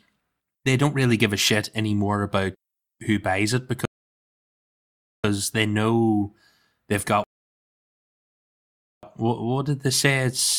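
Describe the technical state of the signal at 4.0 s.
At 4.0 s we're inside a rebuffering stall: the player ran dry after "about who buys it", going silent from 3.85 to 5.24 s, then picking up cleanly at "they know they've".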